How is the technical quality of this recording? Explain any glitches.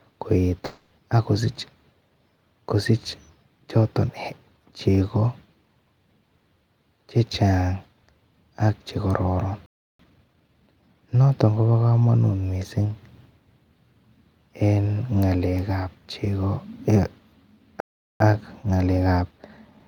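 The recording has three kinds of glitch: one gap early on, and two pauses that are each followed by a rushed stretch.

From 0.65 to 0.93 s there is a long network dropout, the likely cause being lost packets. The receiver fills the whole 260 ms with a fading buzz continuing the last sound, never reaching silence. That 260 ms of speech is gone for good, which sets it apart from a stall.

At 9.66 to 9.99 s and 17.80 to 18.20 s the speech halts dead for about 0.33 s and 0.40 s, a playback stall likely caused by the player starving for data. These are true silences rather than a synthetic buzz, and the speech then resumes.

After each stall comes a time-compressed catch-up. From 9.99 to 11.31 s playback runs at 1.25 times speed, and from 18.20 s to the end at 1.15 times. The player trims small cross-faded slices to clear its backlog, so the speech sounds hurried. Unlike a simple speed-up, the pitch stays normal.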